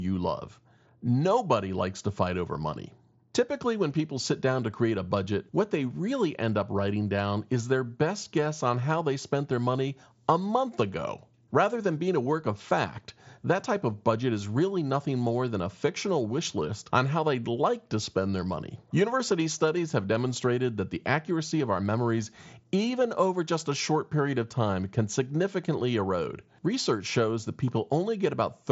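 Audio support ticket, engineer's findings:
Nothing stood out on listening to the speech, which arrives over the Bluetooth mSBC headset link with the bandwidth expected of that path.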